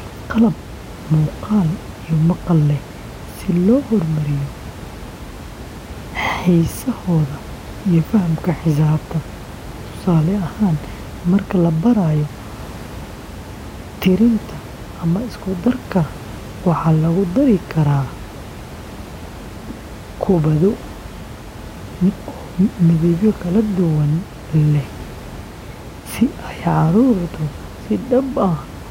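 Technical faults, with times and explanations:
Nothing here counts as a technical fault; the only thing in the background is the room's own noise, sitting about 16 dB under the speech as part of the recording itself.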